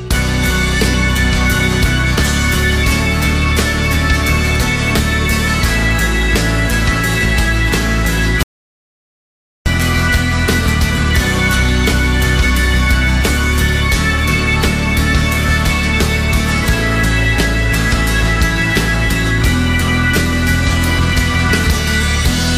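From 8.43 to 9.66 s the sound cuts off into total silence for about 1.23 s, an audio dropout to silence. Unlike a quiet pause, no room tone remains: the input was likely lost while recording continued writing silence, so that stretch is simply gone.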